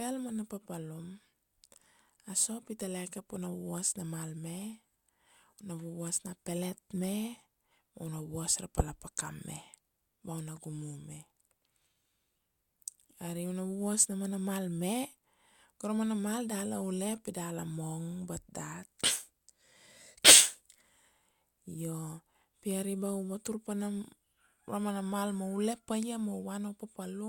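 Corrupt frames were decoded: damaged bits in a couple of frames at 10.56 s leave a faint glitch, then three frames from 19.04 to 19.08 s burst out a loud glitch.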